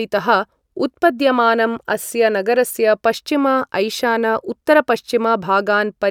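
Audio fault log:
No audible faults detected.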